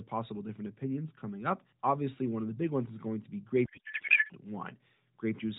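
Speech through the AMR narrowband mobile codec, with nothing above 4 kHz and light coloration that fits the 12.2 kbps mode. From 3.66 to 4.33 s, a codec payload misread turns it into garbled warbling noise. Octet-aligned frames are being unpacked as bandwidth-efficient. On a spectrogram the formant structure there gives way to smeared, disordered energy.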